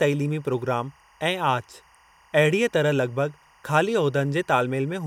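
Timecode bleed runs through the whole speech clip, from start to finish. Linear timecode from a neighbouring track or cable has leaked into the audio path. Its square wave flips between tones near 1 kHz and 2 kHz, producing a steady chirping warble under the speech. The pattern repeats at a rate that fits 23.976 fps code. It sits far down, roughly 35 dB beneath the speech.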